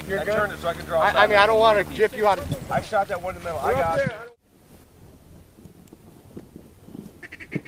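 From 0 to 2.0 s there is video or display buzz: a screen or video cable is leaking into the audio path, adding a hard 75 Hz buzz with fizzy hash above it, sitting roughly 10 dB under the sound. A spectrogram shows a comb of harmonics spaced every 75 Hz, stopping at 2.0 s.

At 4.84 s the level abruptly drops by about 6 dB and stays down to the end. The likely cause is one channel dropping out, so the mono sum carries only half of what both channels shared. The waveform's envelope steps down sharply there, with no fade.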